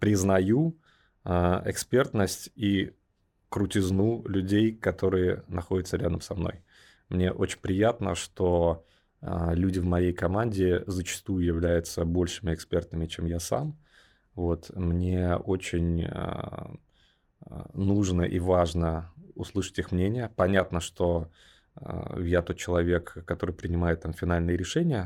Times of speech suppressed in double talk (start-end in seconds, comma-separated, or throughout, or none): none